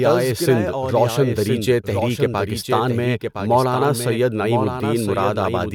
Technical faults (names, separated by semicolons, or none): doubled audio track